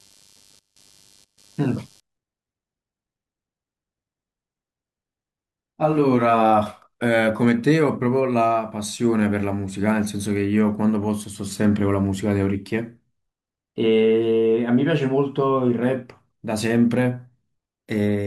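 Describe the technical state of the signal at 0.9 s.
At 0.9 s the speech sits inside a burst of computer activity noise running from 0.0 to 2.0 s. Shifting load in the computer, from the processor, graphics card or mouse, is pulling on the ground the audio circuit shares, and that disturbance leaks into the signal. It comes through as a buzzy, chirping texture pulsing at around 100 Hz, roughly 35 dB below the speech, tracking the machine's activity rather than anything in the sound itself.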